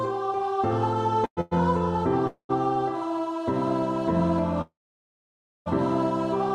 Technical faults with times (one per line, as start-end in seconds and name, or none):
1.25-1.53 call audio freeze
2.27-2.51 call audio freeze
4.61-5.68 call audio freeze